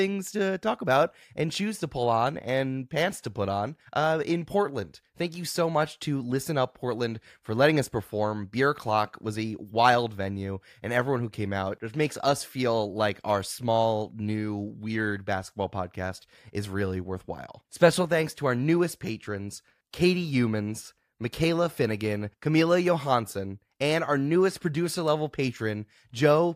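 Nothing goes wrong at any point in this recording, so there's no technical fault to flag anywhere along the way.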